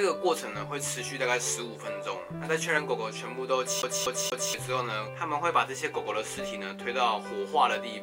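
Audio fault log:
3.82–4.54 s, CD stuck on one turn: a 0.24 s slice of sound plays three times, a fast, even stutter as the laser jumps back a track each revolution. The waveform shows identical blocks split by brief silences; the spectrogram repeats with thin vertical gaps.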